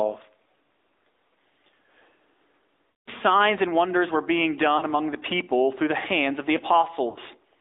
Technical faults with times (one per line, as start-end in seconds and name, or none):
0.00-7.60 gain pumping
0.00-7.60 AMR narrowband mobile codec
2.90-3.09 lost AMR speech frames
4.78-4.85 lost AMR speech frames
7.10-7.19 lost AMR speech frames